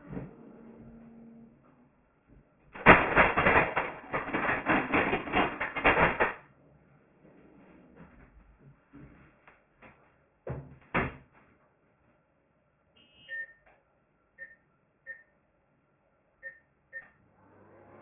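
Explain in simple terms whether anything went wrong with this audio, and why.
From start to finish the sound is gritty and metallic, with harsh, false-sounding tones where the bright, high parts should be. These strange tones are loud, stronger than the real sound near them. This is aliasing. The audio was squeezed down to far fewer samples per second, which fits a drop to a 6 kHz rate, without first removing the high sounds it could no longer hold. Anything above 3 kHz folded back down as wrong, unrelated pitches.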